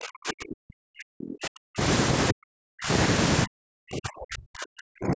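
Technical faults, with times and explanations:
0.0–1.82 s, 2.31–2.9 s and 3.45–5.16 s, speech suppressed in double talk: the speech dips by around 40 dB and breaks up in patches, likely an echo canceller ducking it while the far end talked.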